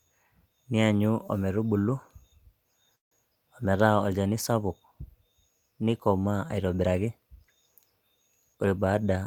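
At 2.95 s the speech breaks off for about 0.19 s, until 3.14 s, its last sound carried on briefly as a fading buzz or hiss before near-silence fills most of that gap: a call audio freeze. The likely cause is packets held up in transit, so the jitter buffer ran dry and the receiver bridged the wait, about 160 ms of it, before resuming exactly where it left off. Nothing is lost, but everything after is pushed later. On a spectrogram it shows as a short fading smear followed by a band with little energy; the waveform decays to nearly flat across it.

From 8.53 s to 9.21 s a jitter buffer speed-up sets in. Excess buffered audio is trimmed away in small pitch-period slices, roughly 150 ms in total, so the speech runs at about 118% speed while its pitch stays put, sounding rushed near the end. In the waveform the voiced cycles stay the same width but syllables are shorter; a spectrogram shows unchanged harmonic spacing with compressed timing.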